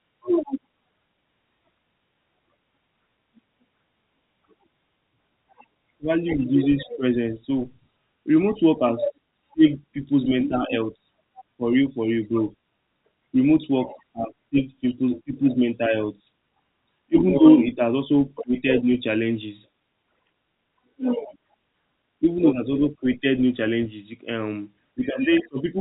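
No technical faults are audible.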